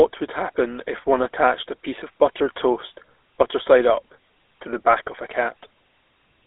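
The speech carries a GSM full-rate codec across the whole clip: audible buzzy, gravelly roughness from pulse-driven vocal-tract modelling, with the band confined to roughly 300 Hz to 3.6 kHz. This fits a 13 kbps GSM voice channel, which discards fine excitation detail.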